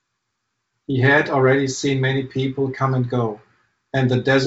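Nothing stood out on listening to this speech, which comes through G.722 wideband telephone coding with its band reaching up to about 7.7 kHz.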